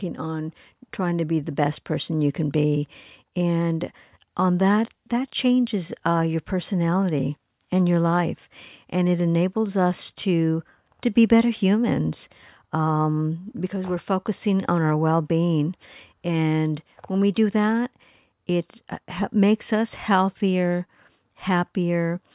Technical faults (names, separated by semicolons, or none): none